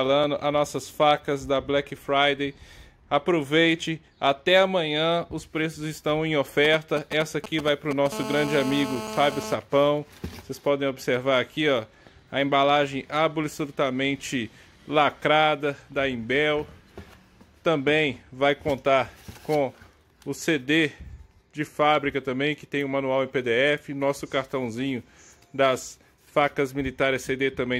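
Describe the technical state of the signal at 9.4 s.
At 9.4 s there's GSM phone buzz, running 8.12 to 9.54 s: a nearby 2G phone's 217 Hz call bursts get rectified, giving a steady, raspy, harmonic-rich buzz about 9 dB below the signal.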